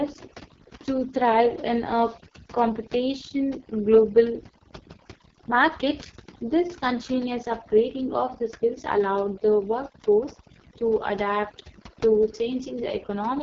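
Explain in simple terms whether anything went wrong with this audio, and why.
The background sounds almost dead silent except for twinkling specks throughout the clip. That is overdone noise removal: a cleanup tool set too hard shut off quiet parts of the sound along with the background noise.

Across the whole clip the speech also sounds rough and raspy, and everything above about 7.2 kHz is missing, which makes it dull. That is the AMR wideband (HD Voice) codec, the phone-call compression, at what sounds like one of its lowest settings.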